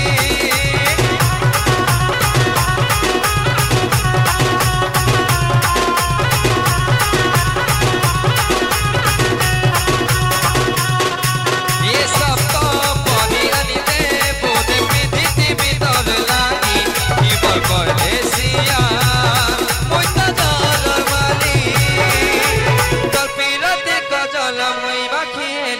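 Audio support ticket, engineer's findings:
No audible faults found on listening; signal stays continuous and stable throughout, with no dropouts, level jumps or added noise to trace to any component.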